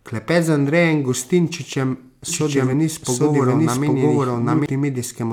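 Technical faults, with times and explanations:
2.28–4.66 s, doubled audio track: an equally loud, dry copy trails about 0.7 s behind and cuts in and out abruptly, likely from a slower second capture path.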